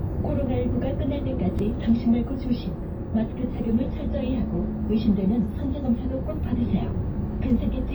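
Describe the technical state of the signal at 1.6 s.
At 1.59 s there is a repeated buffer. The playback device didn't receive fresh audio in time, so it played its last block of about 2.9 ms once more, which fits a 128-sample buffer. The sound is a single click or brief buzz with hard joins at each edge. Unlike a dropout, which leaves a silent gap, the hole here is filled with a copy of the preceding sound, and the timeline slips by a few milliseconds.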